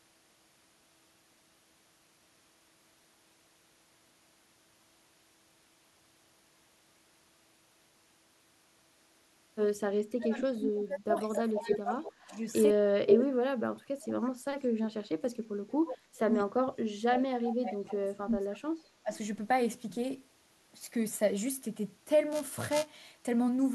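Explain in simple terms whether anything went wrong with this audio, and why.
Three things go wrong here, all after the first ten seconds of the speech.

Speech suppressed in double talk: from 10.17 to 12.39 s, 12.74 to 18.63 s and briefly at 19.03 to 19.11 s, the voice dips hard or cuts out in pieces. Both ends were likely talking at once, and the echo canceller ducked everything.

Echo leak: a delayed copy of the voice pops up at 10.62 to 10.71, 11.33 to 11.79, 12.29 to 12.63, 13.09 to 13.25 and 17.49 to 17.54 s, trailing by about a sixth to a fifth of a second. Some of it is as loud as the real voice. A speakerphone's echo likely slipped past the canceller.

Buffer tearing: from 22.32 to 23.12 s there's a robotic buzz at 375 Hz. The playback software and the hardware fell out of step, so each small chunk of audio, which fits a 128-sample buffer, carries a sliver of stale sound with hard joins.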